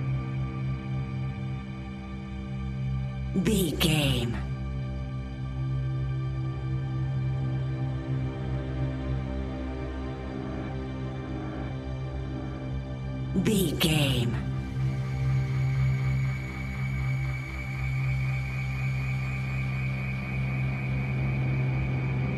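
Nothing stood out on listening; no technical problem could be heard at any point in the audio.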